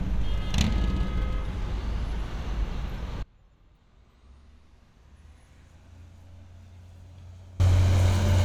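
At 3.23 s the audio drops out abruptly and stays down until 7.60 s, a gap of about 4.4 s. This is an audio dropout to a faint residue: the wanted signal vanishes mid-flow, but a faint trace of the sound carries on through the gap, roughly 25 dB below its normal level. The likely cause is a break in the feed while the downstream path stayed live, passing only leakage. Both transitions are hard edges, not fades.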